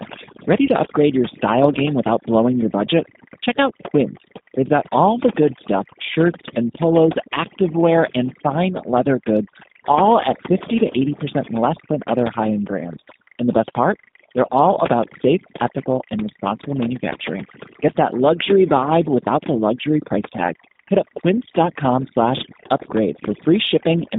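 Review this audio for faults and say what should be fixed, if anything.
Timecode bleed runs throughout at about 20 dB below the speech: a chirping warble from 25 frames/s code flipping between tones near 1 and 2 kHz, visible as steady spectrogram stripes at those frequencies. Route and shield timecode away from audio lines and check for crosstalk before recording.

Overdone noise removal affects the whole clip, gating bands that sit near the noise estimate, so the background drops and breaks up into twinkling, warbling specks. On a spectrogram these show as scattered isolated specks. Use gentler reduction settings and leave a little noise floor in place.

The G.729 codec limits the line to 150 Hz to 3.7 kHz, which fits an 8 kbit/s G.729A stream. The speech sounds plainly rough and synthetic, and the spectrogram shows a hard ceiling with nothing above. Use a wideband codec or a higher-bitrate path where the network allows.

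VoIP packet loss concealed by the speech codec occurs at 0.66–0.69 s and 11.45–11.50 s. The decoder stretches about 20 ms of audio, consistent with a single lost packet, into a buzzy tone or coloured noise that fades. On the waveform this looks like a smoothed, decaying patch. Add jitter buffering and forward error correction, or improve network reliability, to reduce loss.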